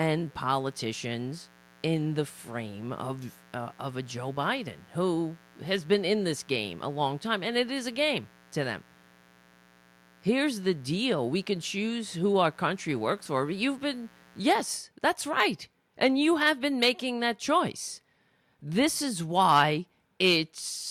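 From the start of the speech to 14.64 s, just before "that's right", a steady, raspy buzz sits under everything, roughly 30 dB below the speech. This is mains buzz at 60 Hz. Sharp switching spikes from something like a dimmer or rectifier, or a gap in shielding, got into the signal path twice per mains cycle. That puts a dense stack of 60 Hz harmonics up into the kilohertz range, which gives the buzz its rasp rather than a smooth hum.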